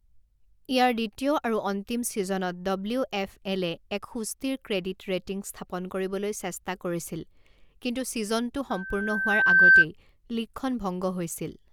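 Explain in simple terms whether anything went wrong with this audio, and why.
From 8.70 s to 9.85 s there is loudspeaker feedback squeal: the microphone picked up its own loudspeaker, and a steady 1.6 kHz tone grew over about a second until it rang far louder than the speech, then stopped.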